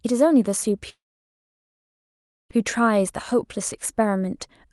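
At 0.89 s the speech breaks off and does not resume until 2.51 s, a gap of about 1.6 s, most likely a long network dropout. The last sound before the break is stretched into a short buzzy tail that fades quickly, and the remaining 1.5 s or so is near-silence. When audio returns it picks up further along, with the missing stretch of speech simply gone. The surrounding audio has the band limit near 12 kHz of the Opus call path.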